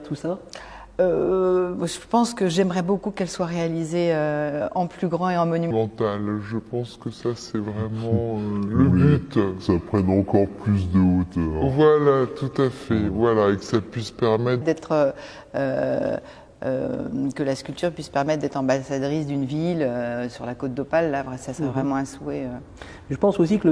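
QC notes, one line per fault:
5.71–14.61 s: wrong sample rate. Sound runs at 0.69x speed, 6.45 semitones low, fitting 32 kHz material played at 22 kHz. The spectrogram shows time-stretched, downshifted harmonics.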